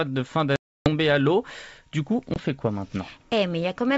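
Packet loss on an ADPCM call hits twice. From 0.56 to 0.89 s, right after "de fin", about 300 ms of data goes missing, roughly fifteen packets' worth, and is filled with silence. When the sound returns at "à l'eau", the decoder's predictor and step size no longer match the sender's, so the resumed audio comes back slightly distorted before it realigns. At 2.34 s, a 20 ms gap, about one packet, leaves a short hard-edged hole just before "fait quoi." The G.722 wideband coding itself works normally around both dropouts.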